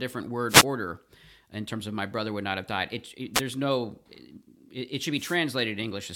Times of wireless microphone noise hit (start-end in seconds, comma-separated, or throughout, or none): 0.48-0.65, 3.34-3.41, 5.16-5.38